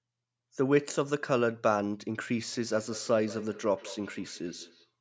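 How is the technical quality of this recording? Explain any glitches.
There's a feedback echo between two devices from 2.57 to 4.93 s. A second device in the room plays the call aloud, and this microphone catches it again, so the speech returns roughly every fifth of a second. Each repeat is thin and ringing, peaking about 17 dB below the speech.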